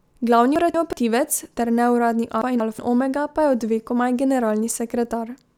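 A chunk of audio was delivered late and played after the one meant to follow it, so this speech has chunks out of order twice: from 0.56 to 0.93 s and again from 2.42 to 2.79 s. Each swapped span covers two pieces of about 186 ms, which points to a buffer of roughly that length. Nothing is missing, but the sound briefly comes out jumbled.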